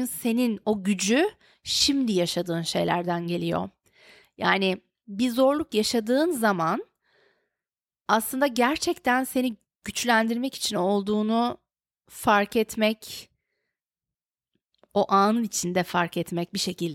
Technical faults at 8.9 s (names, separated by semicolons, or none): none